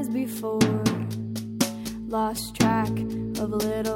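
At 1.81 s a mains hum appears and continues to the end of the clip at 3.95 s. It is a steady low tone at 50 Hz, sitting roughly 20 dB below the programme, with some low harmonics above it. The power line is coupling into the signal path, through a ground loop or the field of a nearby transformer. The tone does not move in pitch or level.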